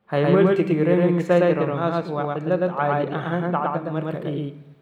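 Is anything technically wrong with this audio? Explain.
Yes. A doubled audio track runs throughout this speech: a second, equally loud full-band copy trails about a tenth of a second behind, likely from a slower capture path or misaligned edit. Unlike room echo or reverb, it's one clean repeat with no decay or added colour.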